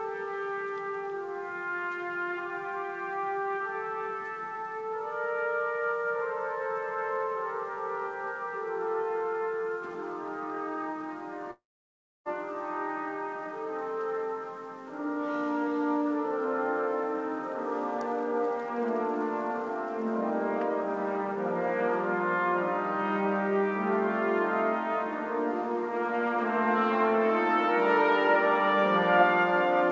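From 11.51 to 12.28 s the sound breaks off. Its last moment smears into a short, fading buzz, then about 0.65 s of silence follows. This is likely a long network dropout. Audio returns with about 0.75 s simply gone.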